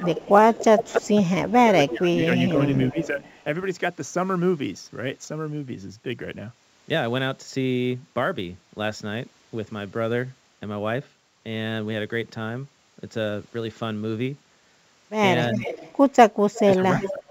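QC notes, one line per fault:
Throughout – sample clock jitter: a fine, gritty hiss rides on the sound. It sits roughly 35 dB below the signal and fits timing wobble of a few microseconds in the converter clock. Unlike steady background noise, it swells on loud and bright passages, follows the slope of the waveform, and disappears in the pauses. That dependence on the signal is what marks it as jitter rather than a noisy preamp or dither.
0.00–0.04, 0.75–1.02, 1.55–3.17 and 16.65–17.31 – speech suppressed in double talk: the level sags in patches. The first three patches drop by about 10 dB and total under a second. The last dips deeper, about 20 dB. The likely cause is an echo canceller turning the talker down while the far side was also active. It differs from a network dropout because the audio ducks and recovers, and it lines up with the echo passages.
0.04–3.25, 15.52–15.94 and 16.54–17.31 – echo leak: a faint, delayed copy of the talker trails the original. 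It comes 0.29 s behind in the first stretch and about 0.33 s behind later. It sits about 15 dB down, rising to about 10 dB down at the end. This is likely loudspeaker pickup that the loudspeaker side's canceller did not fully remove. A single distinct repeat at a fixed lag separates it from room reverberation, which would smear into a continuous tail.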